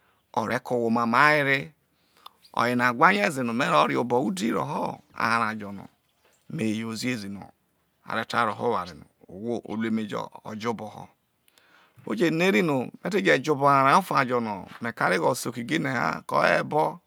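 At 0.51 s a skip ahead, likely a dropped buffer (overrun) losing about 15 ms: a waveform step and thin vertical spectrogram line.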